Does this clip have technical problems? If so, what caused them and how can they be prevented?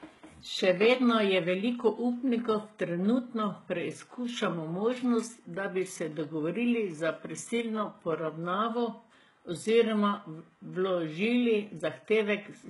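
Yes. Throughout the speech, sibilants sound gritty and lispy with a metallic treble, likely from heavy HE-AAC compression, which fits a 12 kbps stream: the upper band is rebuilt by copying lower bands upward, so its harmonics misalign. A spectrogram shows nothing above 11.5 kHz and blocky, repeated-looking upper bands. Encoding at a higher bitrate, or with plain AAC or Opus, prevents this.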